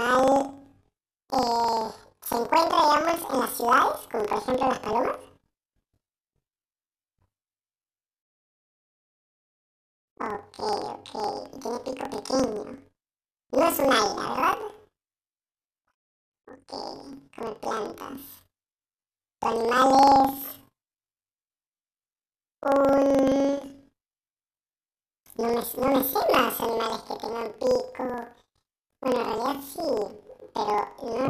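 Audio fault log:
Throughout: planar audio read as interleaved. The speech sits an octave high with a flutter at about 23.4 Hz. Each stretch of roughly 42.67 ms, which fits a 2048-sample block, is stored as all left samples followed by all right samples. Read as alternating pairs, each channel's half plays at double speed in turn, left then right. The overall pace stays correct while the pitch rises 12 semitones, and the switch at every block boundary produces the flutter.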